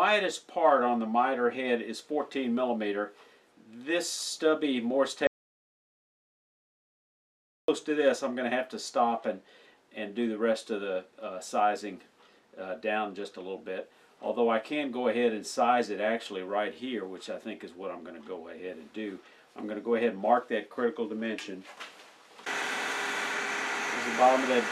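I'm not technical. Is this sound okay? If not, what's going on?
No, there's an audio dropout to silence from 5.27 to 7.68 s: about 2.4 seconds of dead quiet, likely a dropped connection or accidental mute, and that bit's lost.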